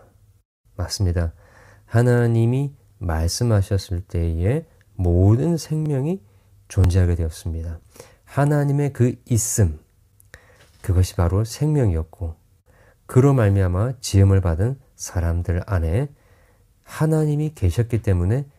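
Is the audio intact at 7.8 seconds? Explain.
No. At 7.83 s there is an overlap between stream segments. Two adjacent segments, which seem to be about one second long, claim the same instant. Trimming that overlap removes a few milliseconds of real speech. The waveform jumps, giving a brief click or skip.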